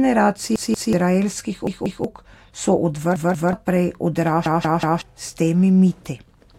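Speech, interrupted by four stutters from repeated buffer faults at 0.56–0.93 s, 1.67–2.04 s, 3.16–3.53 s and 4.46–5.02 s. In each, one 0.19 s segment is replayed with a hard join at every repeat: two extra plays in the first three, three in the last. That length fits an 8192-sample buffer, re-output when new audio failed to arrive in time. Around 0.4 s of speech is lost at each of the first three, and about half a second at the last.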